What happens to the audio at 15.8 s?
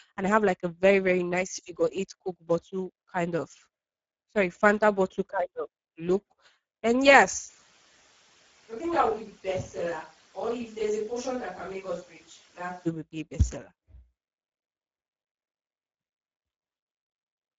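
At 15.8 s the speech is still passing through the Speex codec, whose damage runs through the whole clip. The CELP coder has too few bits to model the excitation, which fits a low-quality setting near 10 kbps. The voice comes out plainly noisy and hoarse, with a rough texture in place of a clean source, and nothing is present above 7.6 kHz, which leaves the top end dull.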